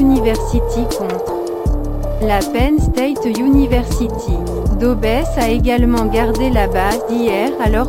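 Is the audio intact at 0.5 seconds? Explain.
No. At 0.5 s, as across the whole clip, crude rate conversion is present. The sound points to a 32 kHz to 44.1 kHz step done by simply repeating the nearest sample, with no filtering. That uneven repetition leaves an error roughly 30 dB below the signal, heard as a gritty, inharmonic fizz riding on loud and bright passages. Unlike bit-reduction noise, it fades with the signal rather than hissing steadily in quiet moments.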